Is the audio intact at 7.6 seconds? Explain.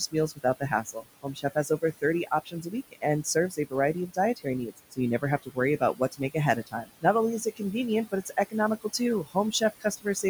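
No. Just after "only is", from 7.45 to 7.74 s, the speech sounds swallowed and faint, dipping by about 17 dB for roughly a tenth of a second. This is speech cut by the noise suppressor, which mistook soft speech energy for background noise and turned it down with the noise. Beneath it, noise suppressor artifacts continue: the background is pulled down by about 19 dB frame by frame.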